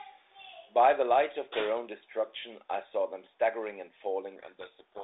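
From 0.16 to 0.24 s, an echo leak is audible. This is likely a loudspeaker on the far side whose echo canceller let part of the returning signal slip through, which was then sent back. The result is a brief, very faint delayed copy of the speech trailing the original by about 176 ms. It is a ghost far below the main level and over almost at once.

From 4.36 s to the end of the clip, the codec payload is misread. The two ends disagree on the bit order inside each G.726 code word, so the decoder takes every sample's bits in reversed positions and rebuilds the wrong differences from its prediction. The speech, carried at 32 kbit/s in a narrow telephone band, is suddenly buried under harsh, grinding distortion. The distortion persists until the clip stops, since the format never realigns.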